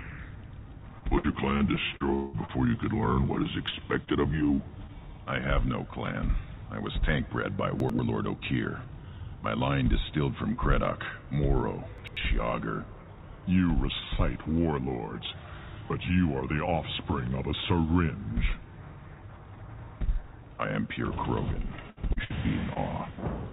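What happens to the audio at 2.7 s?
At 2.7 s you're at the tail end of a burst of repeated packet loss (robotic sound) running from about 0.98 to 2.79 s. Nine holes, the longest 189 ms, get patched by stretching the last bit of sound, so it turns choppy, with pieces missing.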